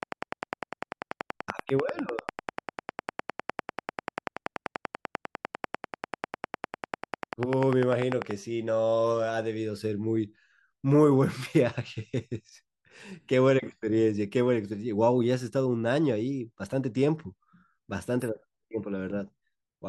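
Speech with a train of clicks from 0.03 s to 8.32 s: around a hundred regular ticks at 10.1 per second, peaking roughly 15 dB above the signal, likely from electrical interference.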